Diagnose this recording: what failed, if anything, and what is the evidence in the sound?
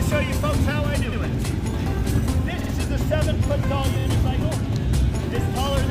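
Three short stutters: at 1.11 s a 78 ms stretch plays once more, at 2.60 s a 52 ms stretch plays twice more, and at 3.99 s a 26 ms stretch plays twice more. This is repeated frames at the codec or storage stage. Whole compressed frames were duplicated, and the 26 ms step fits MP3-sized frames. The decoder replays each block, lengthening the audio by the duplicated time.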